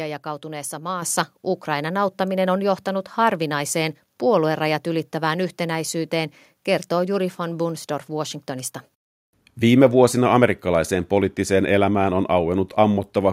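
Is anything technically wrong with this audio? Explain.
Yes. At 1.02 s the microphone volume is stepped up: the calling software judged the input too quiet and raised the device gain by about 7 dB in one jump, so speech and background noise get louder together. The waveform envelope widens abruptly there, and the spectrogram brightens uniformly across all frequencies.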